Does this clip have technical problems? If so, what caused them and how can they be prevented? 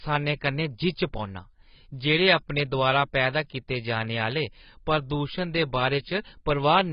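Yes. Throughout the speech the sound is dull and smeared, with nothing above about 5.1 kHz and a warbling, fizzy texture on sibilants. The likely cause is heavy AAC compression: at a low bitrate, which fits roughly 16 kbps, AAC-LC lowers its cut-off and coarsely quantises the remaining bands. Encoding at a higher bitrate, such as 64 kbps or more for speech, would prevent it.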